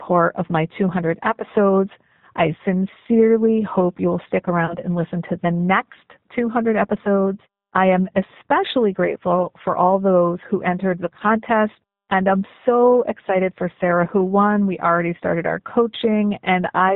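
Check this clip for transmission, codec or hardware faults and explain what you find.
Two faults are present: low-bitrate codec coding throughout, and two short packet-loss concealment events.

Throughout, the speech carries plainly audible G.729 codec damage: band-limited below 4 kHz, slightly rough and synthetic, consistent with an 8 kbit/s model-based speech coder.

VoIP packet loss concealed by the speech codec occurs at 4.66–4.76 s, after "sincerely hope you'll stick" and before "and listen to the", and again at 9.43 s, after "episodes I am especially" and before "for all those who". The decoder extrapolates missing frames from the previous pitch and filter, producing a brief stretched sound that fades. The first gap fits about 30 ms of lost audio and the second about 10 ms.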